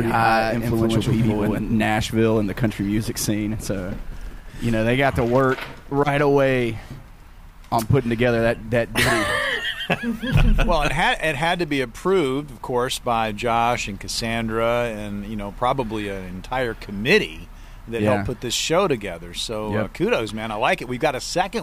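From the start to 1.82 s, a doubled audio track: a second full-band copy, about equally loud, trails by roughly a tenth of a second, likely from a slower capture path. Waveform and spectrogram show every onset repeated, stopping abruptly.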